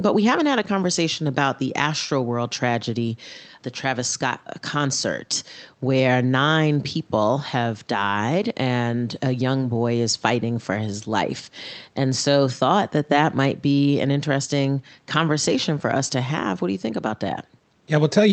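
The speech sits well above a low room noise floor, about 41 dB down, and its high end stops near 8 kHz, which fits a call path running Opus at around 32 kbps, with nothing in the signal going wrong.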